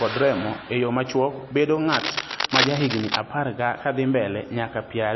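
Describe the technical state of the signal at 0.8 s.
At 0.8 s, as throughout the speech, there is plainly audible MP3 compression damage, likely from a low bitrate of around 27 kbps. Nothing remains above 5.8 kHz, and weak frequency components flicker between frames, which sounds watery.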